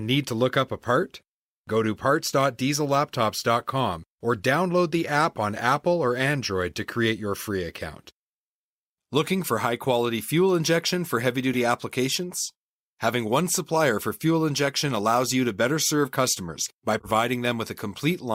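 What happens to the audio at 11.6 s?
At 11.53 to 11.57 s a corrupt frame decoded fault produces a brief chirp, squeak, blip or noise burst in the speech. Damaged bits in a few compressed frames misplace energy across frequencies, seen as a short vertical smear on the spectrogram, with the error peaking near -20 dBFS.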